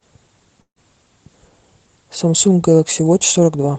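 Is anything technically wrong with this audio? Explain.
Yes. From 0.61 to 0.79 s there is a call audio freeze, likely from delayed packets emptying the jitter buffer: the last sound continues as a fading buzz or hiss, goes silent, then resumes without loss, with the call codec's 8 kHz band limit present throughout.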